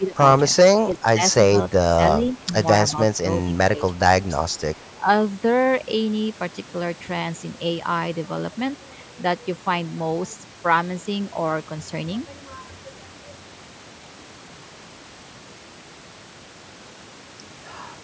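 Speech suppressed in double talk appears at 0.0–0.2, 0.53–0.57, 0.83–1.22, 1.5–1.54, 2.33–2.52, 3.45–4.02 and 5.0–5.07 s. The speech ducks by roughly 5 to 15 dB in brief chunks, likely because an echo canceller couldn't separate this talker from the far side's echo and turned both down.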